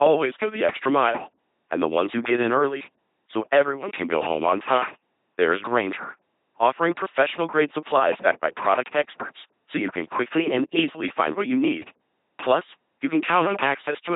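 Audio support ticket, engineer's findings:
LPC-10 vocoder in the path for the full clip, with the sound consistent with a 2.4 kbit/s link. Each frame is resynthesised as pure pulse-train buzz or pure noise through a ten-pole filter, so speech comes out heavily robotic and mechanical, with nothing above 3.8 kHz.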